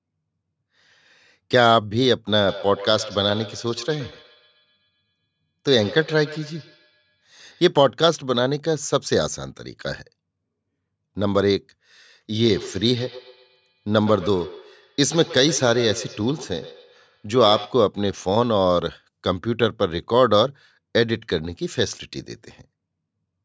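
Feedback echo between two devices from 2.48 to 7.72 s and 12.4 to 17.93 s: a second device replays the speech into the microphone, returning it about every tenth of a second, at about -17 and -16 dB.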